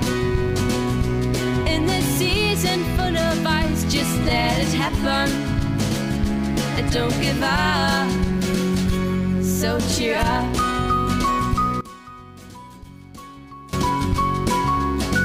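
The sound carries sample clock jitter from start to finish: the converter's timing wanders by a few microseconds, so each sample lands slightly off its intended instant. Because the resulting error scales with how fast the waveform is changing, it comes through as a grainy hiss riding on the louder and brighter passages, sitting roughly 30 dB below the signal and dropping away wherever the sound goes quiet. From 11.81 to 13.73 s the level falls by about 19 dB and what remains is a faint copy, with the centre of the image largely gone. The likely cause is one channel inverted: with one side's polarity flipped, material common to both channels cancels when they combine, leaving only the difference between them audible until the level recovers at 13.73 s.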